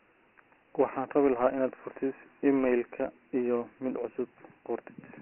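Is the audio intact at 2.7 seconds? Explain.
No. At 2.7 seconds, as throughout the clip, the speech sounds narrow and gritty, with a rough hiss trailing every syllable and nothing above about 3.1 kHz. This is Dialogic VOX ADPCM: coarse 4-bit steps at what sounds like a 6,000-sample rate, consistent with about 24 kbps.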